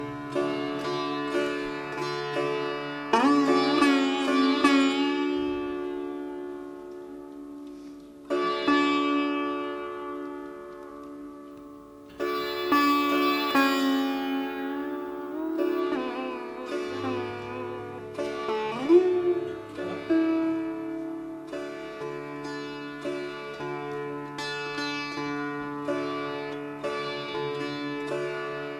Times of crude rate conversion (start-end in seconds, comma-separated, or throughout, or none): 11.51-15.80